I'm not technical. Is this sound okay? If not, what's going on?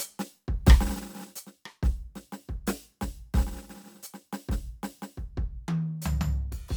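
Yes, nothing wrong is audible in this music clip.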